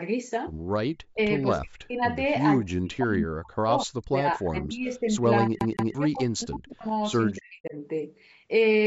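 An echo canceller that likely could not tell the near talker from the far-end echo while both sides spoke pulled the speech down along with the echo. The speech drops sharply, by as much as about 40 dB, in brief bites at 1.13 to 1.19 s and 1.6 to 2.01 s, then in longer broken stretches from 2.6 to 5.11 s and 5.41 to 6.87 s, and again at 7.33 to 7.76 s. This is speech suppressed in double talk, heard as the voice fading and chopping out in pieces.

Inside one of those stretches, from 5.59 to 5.95 s, the playback behaves like a CD stuck on one turn. A scratch kicks the laser back to the same point, so a 177 ms slice plays twice in a row with a brief mute at each jump. The result is a quick, even stutter, and the call's microphone path carries nothing above 8 kHz throughout.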